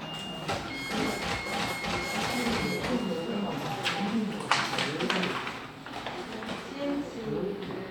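No technical faults can be heard in this recording of sounds.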